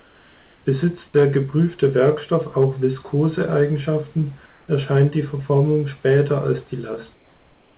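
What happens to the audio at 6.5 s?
Nothing goes wrong at 6.5 s: the audio carries on intact through that moment.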